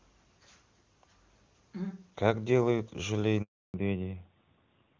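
A phone call with speech that cuts out abruptly at 3.42 s, falling to silence for 320 ms until 3.74 s: a handover gap, where the call switched networks and no speech frames arrived, so whatever was said in that stretch is simply gone. Before the cut the speech is clear, as expected of AMR-WB (HD Voice) at 23.85 kbit/s. When the sound returns at 3.74 s it stays dull and boxy to the end, with nothing above 4 kHz. That is a fallback to narrowband: after the handover the call dropped from AMR-WB to AMR-NB at 12.2 kbit/s, discarding the upper band that wideband coding had carried.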